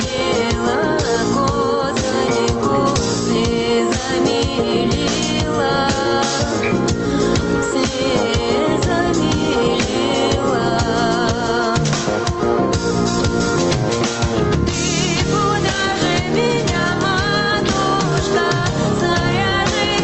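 From start to finish the gain swings by roughly 5 dB, so loud and quiet parts sit closer together and the whole clip feels squashed. This is gain pumping. The likely cause is input gain set far too high, with a fast limiter or compressor clamping down on each peak and releasing between them. The pumping rides on top of call-style audio whose high end stops around 8 kHz.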